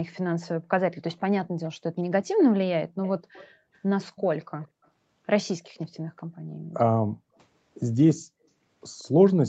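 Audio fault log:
1.1–2.44 s, 3.03–3.5 s, 4.16–4.88 s, 5.63–5.84 s, 8.99–9.04 s: echo leak. A faint copy of the speech trails the original by 177 ms, about 20 dB down at first and fading to about 40 dB down. This is likely a far-end loudspeaker whose echo canceller let residue back into the microphone.
3.54–3.71 s, 7.26–7.37 s, 8.15–8.41 s: background gated by the echo canceller. The room tone dips briefly, by about 17 dB in the first instance and about 40 dB in the later two, then returns. The canceller clamped the microphone while the loudspeaker played and released it afterwards.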